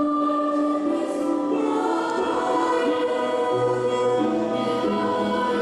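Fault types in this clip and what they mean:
No technical faults can be heard anywhere in the signal.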